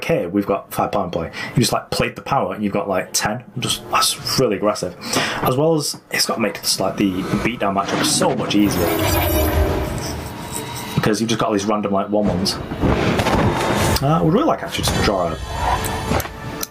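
Gain pumping runs throughout, swinging around 30 dB, likely from excessive input gain driving a fast limiter.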